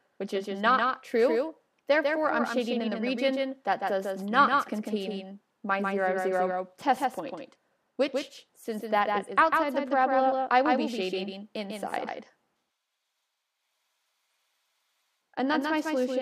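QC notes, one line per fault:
Throughout, doubled audio track: a second copy of the signal is being mixed in, likely from the same source reaching the output twice, once through a slower path. That copy trails the original by roughly 150 ms and sits around 5 dB lower, keeping the full frequency range with no decay or room colour. The result is a hard, slapback-like echo on every onset, which blurs transients and makes the sound feel stuttered rather than reverberant.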